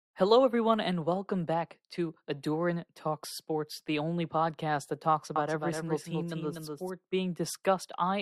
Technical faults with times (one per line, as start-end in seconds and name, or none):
5.36-6.90 doubled audio track